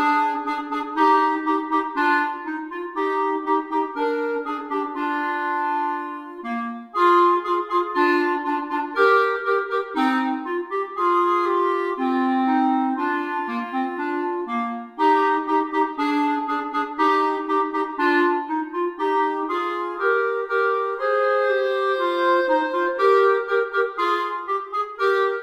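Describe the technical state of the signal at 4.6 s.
At 4.6 s the signal is intact, with no dropout, click, distortion or other fault at that point.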